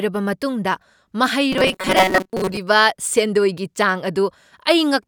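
Robotic sound from repeated short buffers runs from 1.52 to 2.58 s: the speech becomes a rigid, metallic buzz near 188 Hz, likely because late audio was replaced by looping a buffer of about 5.3 ms, with roughly half the signal repeated rather than new.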